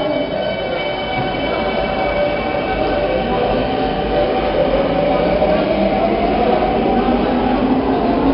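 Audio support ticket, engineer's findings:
4-bit ADPCM compression across the whole clip, heavy codec damage; rate points to roughly 44 kbps at a low sample rate. Coarse 4-bit steps leave a level-following gritty hiss on loud passages, smeared attacks where step size lags, nothing above 5.3 kHz, dull top end.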